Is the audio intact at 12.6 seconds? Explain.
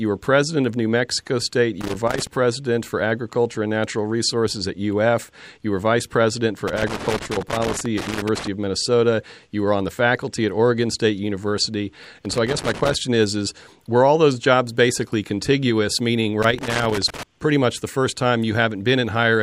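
No. At 12.6 seconds the speech is broken up by an irregular burst of crackle and scratching that runs from about 12.25 to 12.95 s, roughly 0.7 s in all. This is loose connector crackle: a worn or dirty contact in the signal path keeps making and losing connection as it shifts, so the audio is chopped on and off in rapid, uneven bursts, with pops added wherever DC sits on the line.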